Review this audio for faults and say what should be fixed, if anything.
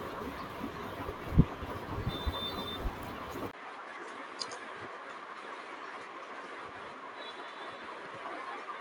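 Input switched to a poorer device, from 3.51 s to the end: after a 20 ms gap the speech loses everything above 10.5 kHz, drops by around 5 dB and gains a new noise floor roughly 35 dB down, likely from recording moving to another microphone. Locking the input device in the recording software would prevent it.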